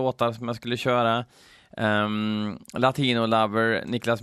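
No technical faults can be heard anywhere in the recording; the signal stays continuous and steady throughout.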